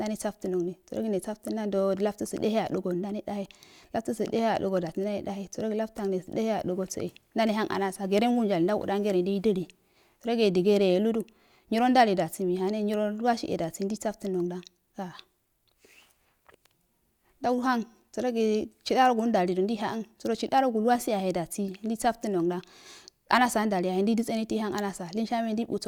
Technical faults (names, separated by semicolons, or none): none